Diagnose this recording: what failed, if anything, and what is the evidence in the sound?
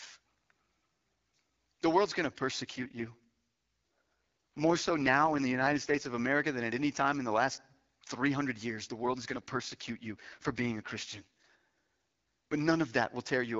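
Network-level AMR rate drop: 2.73–6.14 s and 9.05–11.50 s turn rough and synthetic without gaps, fitting a fallback from 12.65 to 6.6 kbit/s over a weak link.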